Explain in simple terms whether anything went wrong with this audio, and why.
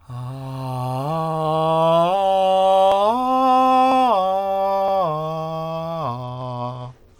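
Near the very end of this music, from about 6.24 s until it stops at 7.19 s, there's a Bluetooth SBC bit pool drop. The wireless link seems to have got crowded, so the phone cut the bit budget for each chunk of audio roughly in half to keep the stream going. With so few bits, the top end is starved and everything else is stored roughly, so the highs go dull and a gritty hiss creeps in.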